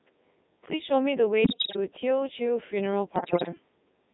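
Codec 2 vocoder artefacts run through the whole clip. Only pitch, voicing, energy and a spectral envelope survive, and the decoder rebuilds the speech from sine waves, so it sounds heavily robotic and buzzy. The quality points to the top 3.2 kbit/s mode.

Bit errors on digital voice radio strike from 1.44 to 1.76 s and again from 3.16 to 3.49 s. Corrupted bits, roughly one in ten in the first burst and a little fewer in the second, throw off whole frames' pitch, level and spectrum, so the speech lurches into warbling bleeps and gibberish.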